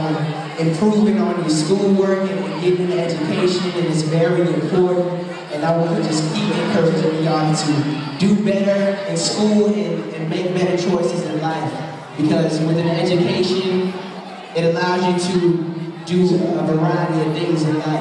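No technical faults can be heard anywhere in the audio, so there is nothing to describe in time order.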